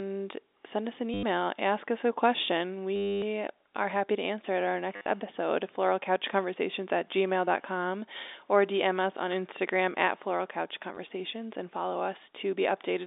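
At 1.14 to 1.23 s after "send us an", 2.96 to 3.22 s, 4.96 to 5.06 s before "episode floralcouchconversations at", and 10.95 to 10.97 s before "and follow", packet loss with the last packet repeated causes robotic stutters. The repetition fits 10 ms packets, buzzing at 100 Hz. On a spectrogram these show as repeated identical blocks.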